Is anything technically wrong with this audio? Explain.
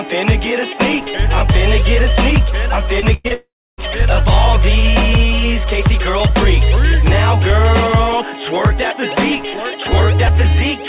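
Yes. Around 3 s the sound is repeatedly broken up by lost audio, in three kinds of fault.

Short concealed packet loss occurs at 3.00–3.04 s and 3.28–3.32 s. Each time about 20 ms failed to reach the decoder. The receiver extended the preceding sound to cover the hole, then blended back in. The result is a brief smear or wobble.

A burst of packet loss follows at 3.14–3.26 s. About 100 ms went missing in a row. The receiver kept the last sound going and turned it down, with no silence. This gives a held buzz or fading hiss, then the audio jumps ahead.

At 3.34–3.80 s about 440 ms is missing, most likely from a long network dropout. The gap first carries a fading continuation of the last sound, then about 300 ms of silence. The audio then resumes further on, without the lost part.

Throughout, the band stops at 4 kHz, which fits a G.711 mu-law call path.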